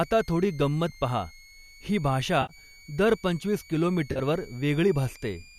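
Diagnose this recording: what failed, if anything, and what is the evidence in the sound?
There's a switching supply whistle running the whole way through, a thin tone between about 2.1 and 2.4 kHz, sitting about 25 dB under the speech. That points to the analogue side: a switcher's burst-mode ripple leaking into the mic or preamp wiring.

On the network side, there's AAC frame loss with concealment in three places. A brief smeared blip at 0.89 s comes right after "आता थोडी". A longer, hollow 70 ms patch runs from 2.42 to 2.53 s, just before "दर पंचवीस". After the second "दर पंचवीस", from 4.12 to 4.20 s, there's a choppier stretch of gaps spread over 80 ms, the longest around 40 ms. The decoder is papering over missing packets from the last good spectrum. The gap sizes fit the 10 ms frames of the low-delay AAC that's likely in the chain.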